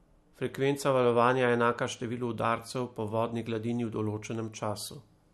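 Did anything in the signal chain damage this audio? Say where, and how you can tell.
No, nothing in this speech recording stood out on listening as damage from any stage of the signal chain.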